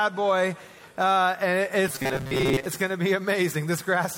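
From 1.88 to 2.66 s the sound turns into a rigid, metallic buzz locked at 134 Hz: robotic sound from repeated short buffers. The likely cause is audio arriving too seldom, so a roughly 7.5 ms slice repeats for most of that stretch. Unlike a stutter, the repeats are too short to hear as separate, fusing into a steady tone.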